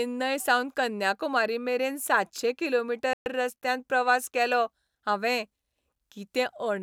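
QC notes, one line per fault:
3.13–3.26 s, Bluetooth stall: interference likely held back packets until the headphone buffer emptied, so the speech cuts to silence for 126 ms, then resumes.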